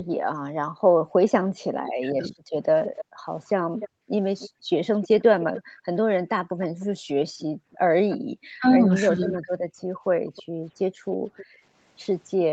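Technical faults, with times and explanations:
0.00 to 1.11 s, 3.05 to 8.32 s and 10.19 to 12.52 s, background gated by the echo canceller. The room sound behind the speech drops away in these spans, by up to about 40 dB. In the first span it is gone for roughly 0.7 s, in the second for about 1.5 s in all. The canceller pulls the microphone down hard while the loudspeaker is playing. The background returns each time the canceller lets go.
1.71 to 2.46 s and 8.6 to 9.76 s, speech suppressed in double talk. The speech dips sharply here, by about 40 dB in the first span and about 35 dB in the second. It is cut for roughly 0.7 s and 0.3 s. Both sides are likely talking at once. The echo canceller cannot tell the near talker from the loudspeaker echo. So it turns everything down together.
2.96 to 8.17 s and 10.36 to 11.46 s, echo leak. A delayed copy of the speech trails behind it, about 300 ms late in the first span and 315 ms in the second. 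It sits about 15 dB below the speech at first, then about 25 dB below. The far side likely plays the call on a loudspeaker. Its echo canceller leaves part of the pickup in place. That leftover is sent back as echo. The speech itself reaches up to 8 kHz, which fits the Opus call path and the microphone processing.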